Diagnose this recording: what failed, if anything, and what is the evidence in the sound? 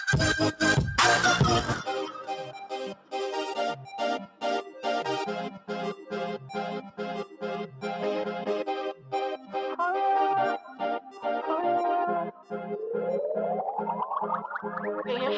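The failure is in call processing: a speech noise suppressor was left running on non-speech sound. Level swings of around 5 dB follow how steady the sound is, not how loud it is. Held and decaying parts sink while onsets pass, which separates this from compressor or AGC pumping. The band stops at 8 kHz, normal for the call's microphone path.

Sound cut by the noise suppressor appears at 2.12–2.74, 2.91–3.14, 4.27–4.43, 7.26–7.41, 10.6–10.76, 11.0–11.24 and 12.32–12.52 s, with drops up to about 11 dB. The sound sinks and its tails shorten but never go silent, so these are suppressor gain dips, not network dropouts.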